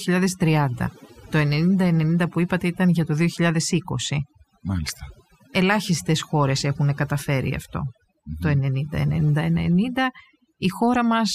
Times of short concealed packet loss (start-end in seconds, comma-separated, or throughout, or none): none